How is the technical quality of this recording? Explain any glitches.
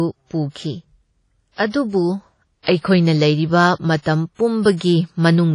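The technical quality is poor: the speech carries plainly audible codec damage throughout, and one attack is smeared by a burst of pre-echo.

Throughout, the audio has the ringing, washy character of low-bitrate transform coding, most likely WMA compression, and the damage fits a bitrate around 32 kbps. Weak spectral detail is dropped, and a hiss swells and fades with the speech. Nothing survives above 10.1 kHz. On a spectrogram this shows as a hard ceiling at that frequency, with patchy, blocky holes where quiet components were zeroed.

At 2.63 to 2.67 s, just before "ꯑꯩꯈꯣꯏꯅ ꯂꯩꯔꯤꯕ", there is pre-echo. The codec spreads its quantisation noise across a whole block, so noise sized for a sharp onset also fills the quiet stretch ahead of it. You hear about 43 ms of hiss leading into the attack, which then sounds soft. A waveform shows a fuzzy ramp before the transient, and a spectrogram shows a broadband smear just ahead of the onset.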